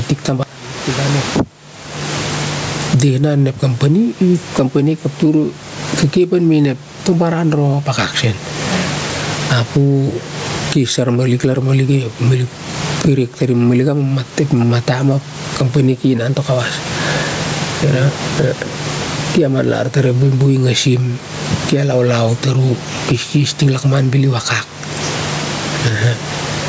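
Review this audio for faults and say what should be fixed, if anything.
Gain pumping runs through the whole recording: the gain swings by about 25 dB. The likely cause is input gain set far too high, with a fast limiter hauling it back down. Lowering the microphone gain so the limiter rarely engages would prevent it.

Audio dropout to a faint residue occurs from 0.43 to 1.40 s. The sound cuts off abruptly for about 0.97 s, leaving only a faint trace roughly 25 dB down. This is likely a momentary loss of the wanted signal while the downstream path stayed live. Checking the microphone connection and capture path for brief interruptions would prevent it.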